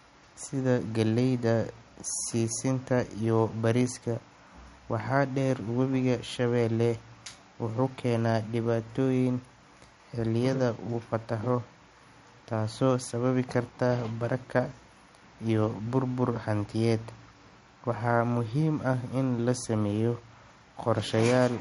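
From start to finish the speech sounds watery and swirly, with metallic chirps on s sounds, smeared attacks and nothing above 11.2 kHz. The likely cause is MP3 compression at a bitrate around 48 kbps, which forces the encoder to cut the treble and drop weak frequency lines from frame to frame.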